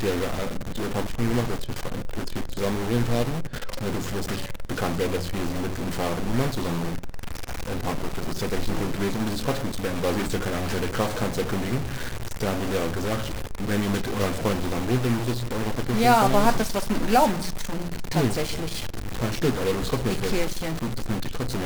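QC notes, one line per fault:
Throughout: stuck bit. Harsh, buzzy distortion sits on all of the audio, and quiet gaps fill with noise near -25 dBFS instead of falling silent. One data bit is likely held fixed, shifting about half the samples by its weight.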